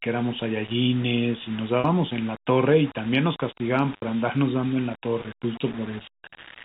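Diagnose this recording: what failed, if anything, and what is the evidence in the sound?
Throughout the speech there is a grainy, level-dependent distortion that tracks the signal rather than sitting underneath it as a steady hiss. Quiet passages and decays turn rough and sputtery, and the error stays roughly 20 dB below the speech. The stage is most likely sample-format conversion: low bit depth without dither, with values rounded to very few steps. The amount of grit fits about a 5-bit word. Because no dither was added, the rounding error stays correlated with the waveform.

Packet loss with pitch repetition is audible at three points in the network path. At 1.80 to 1.84 s there is a 40 ms gap, at 3.97 to 4.02 s a 60 ms gap, and at 6.30 s a brief 20 ms gap. The two shorter ones are bridged by a held, slightly buzzy sustain where the receiver repeats the last pitch period instead of leaving silence. 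The lengths point to two, three and one lost 20 ms packets. The 60 ms gap outlasts the fade of the repeated period, so it fades into silence and the speech returns with a short cross-fade. The G.711 A-law telephone coding at 64 kbps underneath carries its usual 4 kHz band limit.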